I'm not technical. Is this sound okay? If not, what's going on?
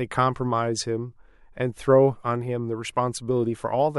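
Yes, nothing wrong can be heard in this recording.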